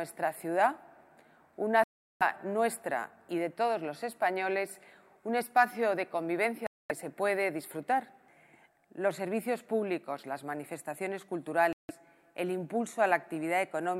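The sound cuts to silence at 1.84 to 2.22 s, 6.67 to 6.91 s and 11.73 to 11.91 s, then resumes further on. These are likely Bluetooth dropouts from packets that arrived too late.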